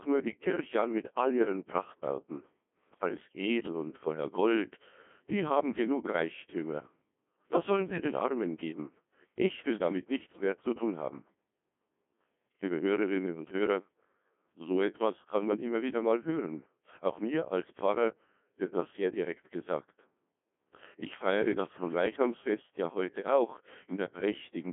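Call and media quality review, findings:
Codec 2 vocoder, throughout the clip. Speech robotic and buzzy, heavy damage, waveform not preserved. Decoder rebuilds voice from sine waves using only pitch, voicing, energy and spectral envelope; very coarse detail fits the 1.2 kbit/s mode. Band roughly 200 Hz to 3.5 kHz, nothing above 3.8 kHz. Probable component: digital-radio or low-rate voice link.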